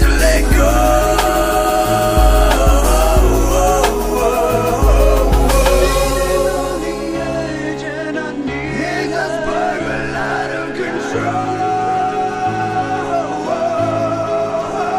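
Nothing stood out as a technical fault on listening.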